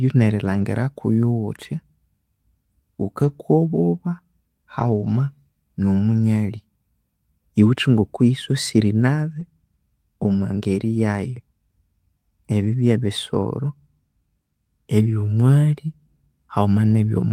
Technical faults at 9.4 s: lost packet rebuilt from error correction

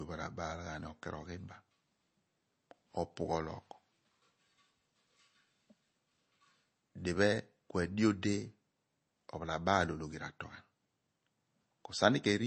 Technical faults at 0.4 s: MP3 compression

